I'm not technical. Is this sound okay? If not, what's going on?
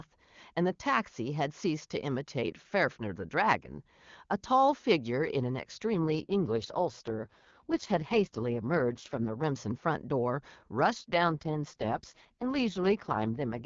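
No. From 5.94 to 9.43 s, and again from 10.97 s to the end, the speech turns rough and robotic. That's an AMR rate drop: the HD Voice call switched to a much thriftier setting, likely because of a weak phone signal, then briefly recovered.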